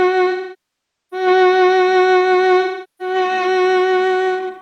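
AAC frame loss with concealment hits this music clip at 0.31–1.27 s and 2.61–3.15 s: the decoder patches the gaps from the last good spectrum, leaving smeared, noisy stretches.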